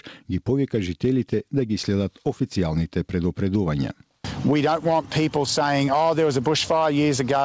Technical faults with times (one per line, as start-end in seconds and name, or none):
0.00-7.44 gain pumping